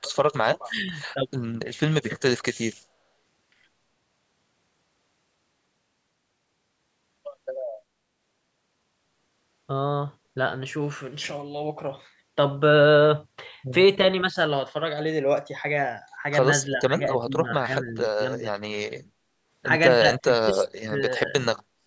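A speech recording, passed through call microphone processing with nothing above 8 kHz, carries a DC offset throughout: the waveform sits off zero, wasting headroom and leaving steady energy at the very bottom of the spectrum. An echo canceller, likely confused by both sides talking at once, produced speech suppressed in double talk, pulling the voice down in pieces at 0.0 to 0.17 s, 0.65 to 0.99 s, 16.75 to 18.49 s, 20.19 to 21.34 s and from 21.78 s to the end. The dips reach from about 10 dB to about 35 dB, with the deepest near the close.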